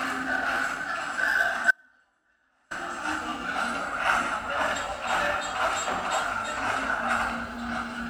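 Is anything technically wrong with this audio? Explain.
Yes, there's an audio dropout to a faint residue from 1.71 to 2.71 s. For about a second the sound abruptly drops to a faint leak roughly 35 dB down, then snaps back. The likely cause is the signal feed breaking while the downstream path stayed live.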